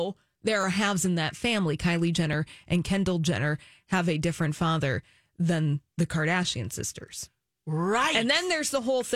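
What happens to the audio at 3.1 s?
Nothing goes wrong at 3.1 s; the speech plays through that moment intact, with no dropout, click or distortion.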